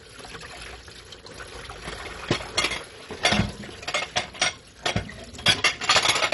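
Everyday sound, dull throughout, with nothing above 11.3 kHz and a gurgling, granular texture, likely MP2 compression at a low bitrate around 48 kbps; flickering sub-bands distinguish it from simple low-pass filtering.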